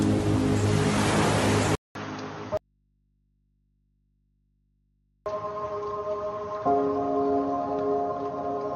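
At 1.75 s the sound breaks for about 200 ms and returns duller and boxier, and it stays that way to the end. Nothing above 6.6 kHz comes through after the break, the level sits about 10 dB lower, and a new, faint noise floor appears well below the signal. This matches an input switched to a poorer device, likely a change to another microphone or a headset call profile, whose narrower band and different gain reshape the tone.

From 2.57 s to 5.26 s the signal vanishes for about 2.69 s and leaves only low mains hum, far below the normal level. The cut-out and the return are both abrupt, with no fade. This is an audio dropout to a faint residue. The source was lost, but the input path stayed live, likely because the chain after the break kept running and passed its own hum while nothing arrived from upstream.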